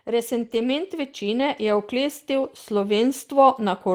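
Automatic gain rising runs from 0.05 s to the end, so the voice and background swell up together as the control slowly lifts a too-quiet input. From 0.41 to 0.63 s, and again briefly at 2.43 to 2.45 s, there are lost packets rebuilt from error correction. The first rebuild lasts 120 ms and the second 20 ms. The decoder played low-bitrate backup copies, so there's no gap, just rougher, noisier patches.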